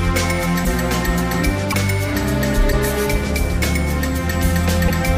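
A likely broken MP3 bit reservoir: with frames missing from the stream, the frame after each gap reaches back for borrowed data and decodes bytes belonging to another frame. The audio skips forward at 0.64, 1.71, 2.71 and 4.87 s, and each time a burst of roughly 30 ms, about one 26.1 ms frame, comes out as a garbled chirp or noisy smear before normal decoding resumes.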